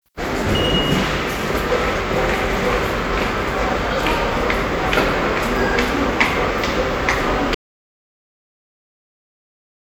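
At about 7.55 s the sound just stops dead, and what follows is an audio dropout to silence that runs all the way to the end, roughly 2.4 s of it. It's plain silence, not a quiet stretch, so there's no room tone or hiss left underneath. The likely story is the input went away, a loose connection, dropped link or accidental mute, while the recorder kept writing silence. Whatever happened after that point is simply missing.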